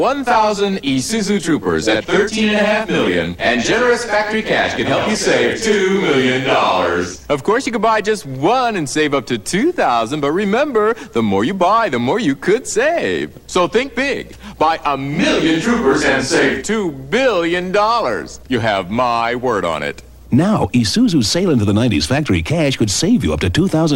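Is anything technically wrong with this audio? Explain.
Yes. Corrupt frames were decoded at 3.05 to 3.08 s and 4.07 to 4.12 s. The decoder played frames with damaged bits, so misread gains put energy at wrong frequencies, heard as short chirpy bursts. The first is loud, peaking around -5 dBFS, and fits one frame. The second is quieter and fits about two frames.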